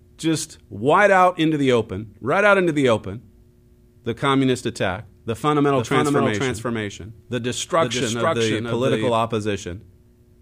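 From 5.76 s to 9.12 s, just after "the communist attack the", a doubled audio track runs: a second full-band copy trails about half a second behind at roughly equal loudness, dry and abruptly switched on and off, most likely a second capture path or misaligned edit.

At 8.27 s, inside that doubled stretch, a corrupt frame was decoded. A brief chirp-like burst peaking around -25 dBFS lands at wrong frequencies, pointing to about two damaged compressed frames the decoder played anyway.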